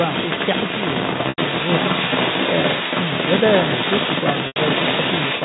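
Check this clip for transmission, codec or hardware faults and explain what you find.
Two kinds of fault are present: a second voice leaking through for the whole clip, and two short dropouts concealed by pitch repetition.

Other side's voice leaking through: from 0.0 to 5.44 s a second voice runs under the speech at a level comparable to it, or slightly stronger. The likely cause is loudspeaker playback of the far end reaching the microphone without the echo canceller removing it.

Packet loss with pitch repetition: at 1.29 to 1.38 s and again at 4.47 to 4.56 s, roughly 90 ms of audio is missing each time, which fits about three lost packets. The receiver filled each gap by looping the last pitch period, so both spots sound held and buzzy, fading before the speech resumes.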